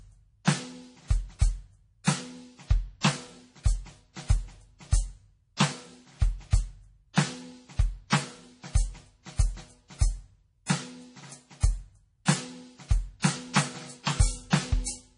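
From the start, the whole music track has that watery, swirly quality of heavy MP3 compression, likely from a very low bitrate, something like 32 kbps. Nothing comes through above about 10.5 kHz, so the top end sounds dull and closed in. Quieter detail seems to flicker in and out as the encoder drops weak frequency content from one frame to the next, and the highs pick up a metallic, chirpy edge.

Near the end there are two cases of pre-echo. At 13.20 s a short hiss creeps in about 45 ms before an attack, and at 14.50 s the same happens over about 26 ms. What's going on is that the codec spreads its quantisation noise across the whole block, so noise meant to hide under the loud hit also fills the quiet gap just before it. That leaves each attack sounding soft and smeared instead of crisp.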